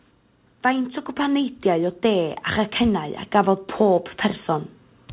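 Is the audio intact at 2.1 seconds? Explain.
No. At 2.1 s the clip is in the middle of an automatic gain rising episode that runs from 0.62 to 4.11 s. The gain control judged the input too quiet and kept raising its gain step by step, adding about 5 dB over those three and a half seconds. The speech and the background noise floor swell together, so the level creeps upward rather than holding steady. This happens within the narrow telephone-band sound of the call path.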